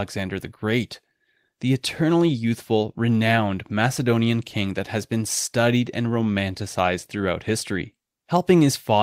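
No technical faults can be heard anywhere in the speech.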